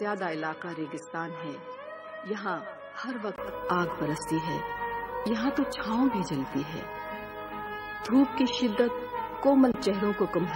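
From 0.0 to 3.38 s the audio is somewhat quieter and duller, with nothing above 10.4 kHz and a faint, different noise floor. This is likely an input switched to a poorer device. At 3.38 s a 20 ms gap appears in the waveform, then the level rises and the spectrogram fills in above 10.4 kHz.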